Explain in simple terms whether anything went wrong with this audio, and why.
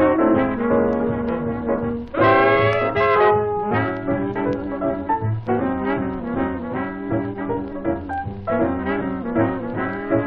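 No faults can be heard.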